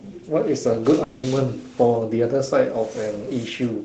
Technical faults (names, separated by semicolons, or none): long network dropout